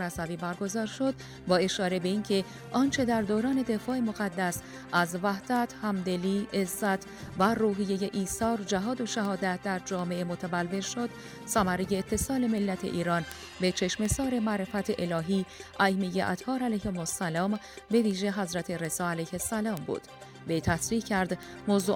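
Word clock ticks run from 0.21 s to 21.8 s, sharp clicks about every 0.2 s, as an unlocked receiving clock, roughly 150 ppm off, slips single samples.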